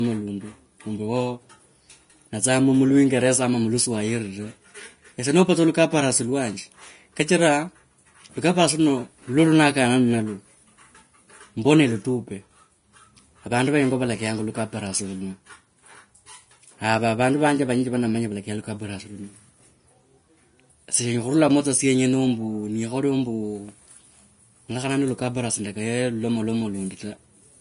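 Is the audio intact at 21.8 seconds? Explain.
No. At 21.8 s the speech carries the same damage that runs through the entire clip, most likely Vorbis compression at a low quality setting. Nothing is present above 10.5 kHz, and the remaining treble is quantised so coarsely that its fine detail is replaced by noise of similar energy. The result is a hissy, grainy top end, roughened tones and softened attacks, which points to a bitrate of roughly 33 kbps.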